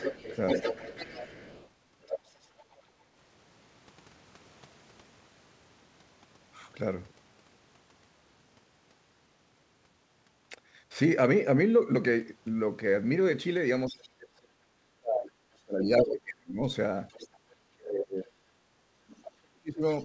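From 0 to 2.77 s a second voice sits just under the talker. This is likely the other side's voice leaking through past the echo canceller.

From 13.88 to 16.59 s the talker dips and breaks up, by about 35 dB at worst. This is likely speech suppressed in double talk, with the canceller ducking both sides. Echo scraps surface at 14.02 to 14.08 s, very faint, and at 15.99 to 16.13 s, as loud as the talker.

Another faint leak comes from 17.09 to 17.38 s. Then from 17.38 to 17.48 s the room sound drops by about 9 dB. The background is gated by the echo canceller, cutting the microphone while the loudspeaker plays.

From 17.76 s to the end, double talk likely suppresses the talker again, by about 40 dB. A faint echo fragment appears at 19.99 to 20.04 s. Throughout, nothing is heard above 8 kHz, which fits the G.722 call path.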